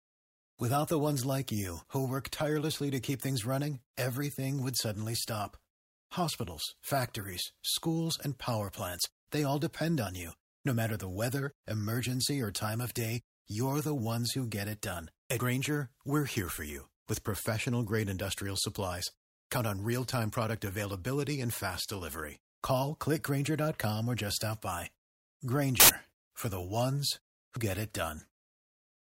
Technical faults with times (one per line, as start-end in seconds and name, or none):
15.30-15.40 compressed frames skipped
25.80-25.89 corrupt FLAC frame
27.56 compressed frames skipped